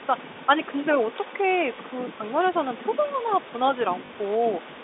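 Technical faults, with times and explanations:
0.00–3.64 s and 3.85–4.84 s, echo leak: a fainter copy trails the speech by about 0.33 s, first roughly 10 dB down, later only about 5 dB down. This is likely a far-end loudspeaker echo the canceller missed, unlike reverb, which smears rather than repeats.
1.76–1.78 s and 4.06–4.10 s, packet loss with last packet repeated: a small blip and then a short robotic stutter as 20 ms and then 40 ms of audio are replaced by replayed packets, rather than going silent.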